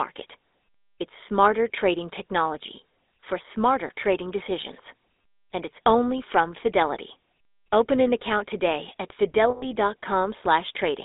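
A speech recording carried over a GSM full-rate codec, which fits the 13 kbps first-generation coder. It models the vocal tract and excites it with sparse, regularly spaced pulses, so the voice has a plainly audible buzzy, gravelly roughness, with the band limited to roughly 250 Hz to 3.7 kHz. At 9.5 s, just after "an account today at", lost GSM frames were concealed by repeating the last good frame's parameters. The sound holds as a rough metallic ring for about 0.15 s, which points to around six frames lost.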